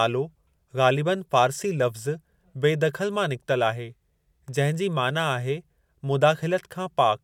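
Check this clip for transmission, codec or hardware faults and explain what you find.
No transmission, codec or hardware problem can be heard anywhere in the speech; the signal stays continuous and stable throughout.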